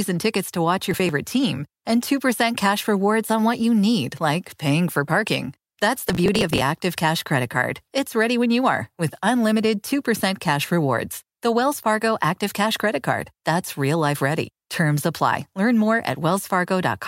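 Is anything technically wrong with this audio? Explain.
Yes. Processor overload crackle occurs twice in this speech. From 0.91 to 1.09 s, between "tickets to watch" and "team and", and again from 6.08 to 6.61 s, the processor falls behind and misses a run of buffer deadlines. Each missed buffer is skipped, leaving a hard-edged hole. The spacing fits buffers of roughly 5 ms, around ten missed in the first burst and around forty in the second, heard as gritty tearing over the speech.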